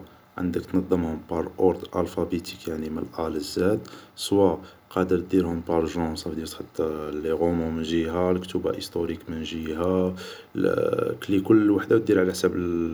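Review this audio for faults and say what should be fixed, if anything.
No faults; nothing needs fixing.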